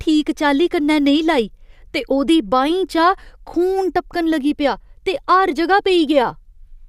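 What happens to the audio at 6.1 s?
Nothing goes wrong at 6.1 s; the speech carries on intact through that moment with no dropout, click or distortion.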